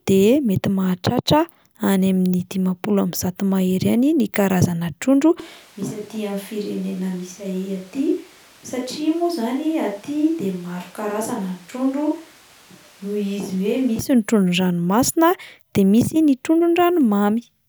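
From 5.40 to 13.99 s speech abruptly turns hollow and roomy, likely a switch to a distant microphone; the waveform drops about 10 dB, and the spectrogram loses bass as noise rises.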